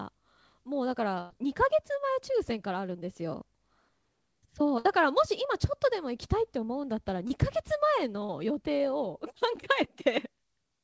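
A burst of packet loss runs from 1.21 to 1.31 s, and another from 4.79 to 4.86 s. In each, the receiver stretches the last sound into a held buzz or hiss that fades away, and the speech resumes with about 90 ms and 60 ms missing respectively. On a spectrogram each appears as frozen, smeared sound dimming into a short gap.

Short concealed packet loss follows at 7.28 to 7.31 s and 8.25 to 8.30 s, hiding roughly 20 and 40 ms. Each gap is patched from the preceding sound as a brief smear or wobble, which shows as a blurred vertical seam in the waveform. Throughout, the spectrogram is empty above 8 kHz from the call path's band limit.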